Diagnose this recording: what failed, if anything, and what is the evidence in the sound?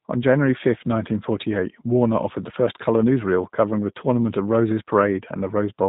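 G.729 codec damage runs through the whole speech clip at the codec stage. Nothing above 4 kHz survives, and the speech sounds rough and slightly synthetic, which fits an 8 kbit/s coder that rebuilds each 10 ms frame from a vocal tract filter, a pitch predictor and a few pulses.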